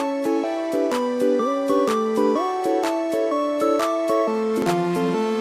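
Near the end, around 4.53 to 4.72 s, compressed frames are skipped: roughly a tenth of a second of audio drops out and the sound jumps ahead.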